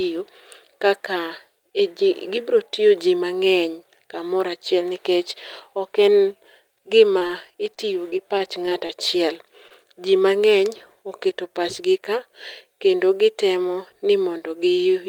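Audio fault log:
7.18 to 7.31 s and 9.68 s: short concealed packet loss. Twice near 7.2 s and once more at 9.68 s, just before "ji mang'eny oketo pach", about 20 ms of speech failed to arrive in time. Each time the decoder bridged the hole by extending the preceding sound for a little over 20 ms. It then cross-faded back into the real signal. Each event is heard as a brief smear or wobble.
7.74 to 8.91 s: repeated packet loss (robotic sound). Across this stretch of about 1.2 s, six separate holes appear, none longer than 22 ms. Together they remove about 80 ms of speech. The receiver patched each one by continuing the last sound, about 105 ms of filler in all, roughly a tenth of the span. Because the patches come close together, the speech turns choppy, with small pieces missing.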